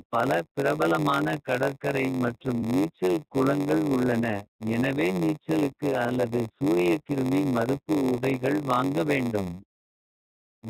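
Right from the start the whole clip of speech has that iLBC codec sound: the top end stops around 4 kHz, and voiced sounds come out slightly rough and synthetic. The damage is plainly audible. The character fits iLBC's 15.2 kbps mode with 20 ms frames, where each frame's excitation is coded on its own, so you get a steady grainy texture rather than smooth detail.

Running alongside that for the full length is a block size mismatch (padded). Each block handed downstream is a bit shorter than the 512 samples the next stage reads, and the shortfall gets filled with zeros. That tiny gap repeats every block, so there's a constant buzz at about 93.8 Hz. The speech also runs slower, at 0.938 times normal speed, while the timbre stays about where it should be.

At about 2.58 to 2.63 s there's the first patch of lost iLBC frames. It comes right after "பல பிரபலமான கடற்கரை மற்றும்" and just before "நீச்சல் குளங்கள் உள்ளன எனவே". 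About 40 ms went missing, which points to two frames. The decoder papered over the hole by repeating the last pitch cycle mixed with noise, so it sounds like a brief held, slightly buzzy vowel.

The second loss sits at about 6.06 to 6.12 s, after "குளங்கள் உள்ளன எனவே நீச்சலுக்கு" and before "சூரியக்கிருமி மறுப்பு உடைகள் வாங்க". It's the same 40 ms gap with the same smeared, droning fill. Because iLBC frames don't depend on each other, the speech snaps back cleanly right after both losses.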